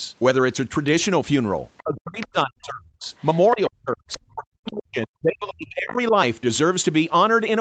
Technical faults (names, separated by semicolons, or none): speech suppressed in double talk; other side's voice leaking through